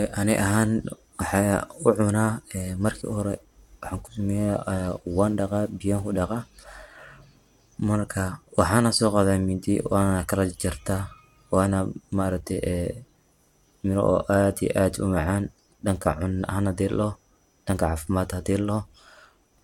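Nothing goes wrong technically anywhere in this speech recording, so there's no fault to point to at any moment.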